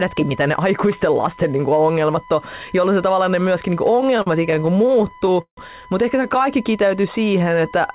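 Right from the start there's a USB whine, a steady 1 kHz tone sitting roughly 25 dB under the speech the whole way through. That's current drawn in the bus's 1 ms frames leaking in through power or ground, so it never changes pitch.

Just after "ne myöskin niin kuin", from 3.91 to 5.58 s, you get repeated stalls, a proper stutter. Packets kept turning up late, so the jitter buffer ran dry 25 times and the receiver stretched the last sound each time. That's about 426 ms of filler with nothing actually lost; the longest wait is 155 ms. It drags and stumbles. It happens again after "ehkä se", 6.23 to 6.45 s, with five short catches, none longer than 12 ms.

From 6.64 s to 7.93 s there's a jitter buffer slow-down. The receiver was rebuilding its reserve by repeating pitch periods and bits of pause, adding about 145 ms, so the speech runs at 89% speed with the pitch unchanged and sounds a bit drawn out. 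All of this rides on a G.711 mu-law call path, which is why there's nothing above 4 kHz.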